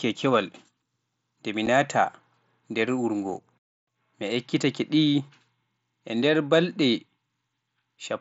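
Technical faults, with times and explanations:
1.66 s, unconcealed Bluetooth headset packet loss: just after "e mi" the speech drops out for about 7.5 ms with hard edges. That length fits one mSBC frame lost on the headset link and replaced with silence or an idle pattern instead of being patched over. Concealed loss would smear or repeat the sound across the gap. A digital click would lack the gap. With the wideband mSBC link, speech resumes still capped near 8 kHz.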